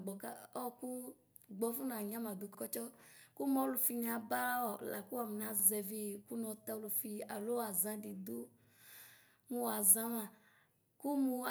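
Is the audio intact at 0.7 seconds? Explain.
Yes, the audio is intact at 0.7 seconds, with no dropout, click, distortion or other fault audible at that point.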